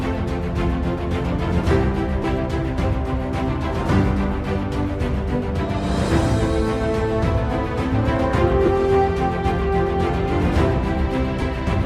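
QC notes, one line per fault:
2.22 s, 8.66 s, 11.41 s: lost LE Audio frames. Gaps of 15 ms, 15 ms and 7.5 ms, the last pointing to a single 7.5 ms frame. The LC3 decoder refills each gap with the previous spectrum under random signs, so you hear a brief noisy smear rather than a dead dropout or click.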